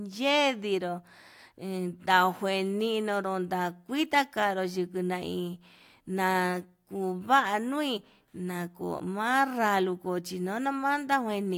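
No technical faults are audible anywhere in this speech recording.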